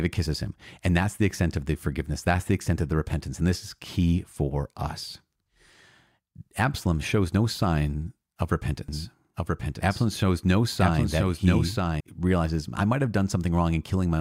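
From 8.88 to 12.00 s, a doubled audio track appears. A second copy runs about one second behind, a few decibels quieter, starting and stopping abruptly. It is likely a duplicate capture path.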